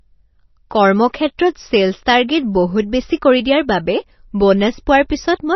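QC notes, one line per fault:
Throughout, likely MP3 compression at a low bitrate, around 24 kbps: nothing above 6 kHz, dropped weak frequency lines give heavy watery swirl and smeared speech attacks.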